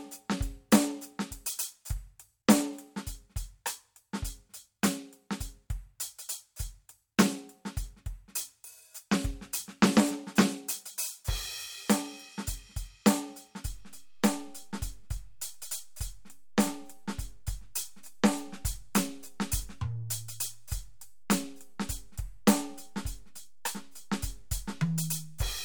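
A music recording with a DC step at 13.66 s: the waveform's zero line jumps to a new offset and holds there to the end, heard as a single low thump while the music carries on. A waveform shows the trace shifted off centre; a spectrogram shows a brief broadband vertical stripe at the jump.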